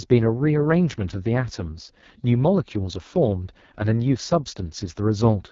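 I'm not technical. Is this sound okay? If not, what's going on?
No. The speech was squeezed through the AMR wideband (HD Voice) codec, the phone-call compression behind HD Voice, at one of its lowest settings. For the whole clip, the codec rebuilds the voice from a rough model instead of keeping the real sound, so it comes out rough and raspy. It also keeps nothing above about 7.3 kHz, which takes away the crisp, airy top of the sound.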